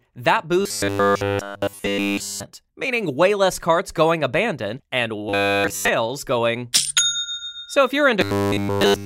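From 0.61 to 2.43 s, 5.29 to 5.89 s, and 8.21 s to the end, the sound becomes robotic from repeated short buffers. It has a rigid, metallic 100 Hz buzz, which fits a 10 ms slice being likely replayed while fresh audio is skipped.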